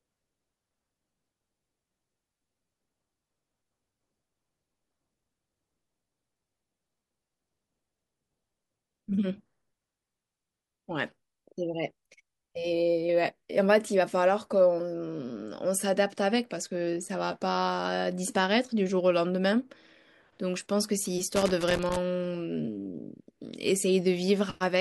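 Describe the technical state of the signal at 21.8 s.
At 21.8 s a worn or dirty contact in the connection is intermittently making and breaking, chopping the signal and adding pops from any DC on the line. This loose connector crackle runs from 21.36 to 21.96 s, an irregular burst of scratchy crackle over the speech.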